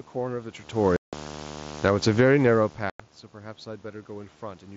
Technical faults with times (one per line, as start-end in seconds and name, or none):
0.00-4.77 video or display buzz
0.96-1.13 unconcealed Bluetooth headset packet loss
1.70-2.43 automatic gain falling
2.34-4.41 automatic gain rising
2.90-3.00 unconcealed Bluetooth headset packet loss